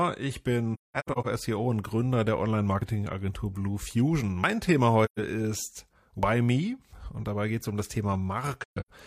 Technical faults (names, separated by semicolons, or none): AAC frame loss with muting; dropped buffer (overrun)